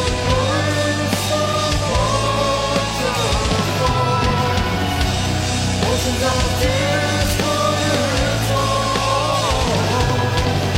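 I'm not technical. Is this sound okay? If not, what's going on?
No, not quite. At about 6.32 seconds there's a tiny skip lasting roughly 40 milliseconds, ending around 6.36 seconds. This is an overlap between stream segments. The audio arrives in chunks, and here two chunks claimed the same stretch of time. The player trimmed the overlap, but that bit of sound was never actually duplicated, so a sliver of real audio went missing and the sound jumps straight ahead.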